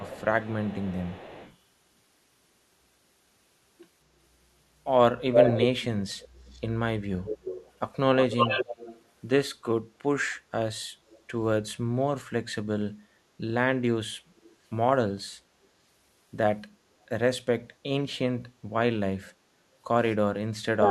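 Echo leak appears at 0.0–1.53 s, 5.33–6.59 s, 7.25–7.69 s, 8.3–9.0 s and 11.12–11.18 s. A delayed copy of the speech returns 232 ms behind at first, then 291 ms behind. It is faint at the start, about as loud as the speech itself at 5.33 s, and barely audible at 11.12 s. The likely cause is a loudspeaker on the far side whose echo canceller let part of its microphone pickup through.

Speech suppressed in double talk runs from 20.43 s to the end. The speech dips sharply, by about 40 dB at its deepest, likely because the echo canceller turned down both talkers at once.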